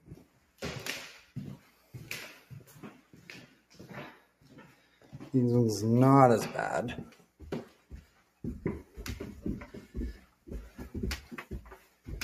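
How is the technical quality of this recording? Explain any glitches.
The technical quality is poor: two problems run through the whole recording, and there are repeated level dips on top of them.

Mains hum at 60 Hz sits roughly 30 dB below the signal. A ground loop or nearby transformer leaks power-line current into the audio. On a spectrogram it shows as a flat horizontal line at 60 Hz.

A noise suppressor applied to music or sounds stays engaged throughout. It treats sustained tones and tails as noise and pulls them down by about 10 dB, so the sound pumps and thins. In the waveform the envelope looks choppy.

Sound cut by the noise suppressor appears at 0.01–0.62, 1.58–1.94, 2.35–3.79, 4.13–5.14, 7.11–7.42, 7.65–8.39, 10.18–10.48 and 11.76–12.07 s. In these passages sustained sound sinks by about 9 to 11 dB and decays stop early. The waveform shrinks there, and the spectrogram shows tails fading abruptly.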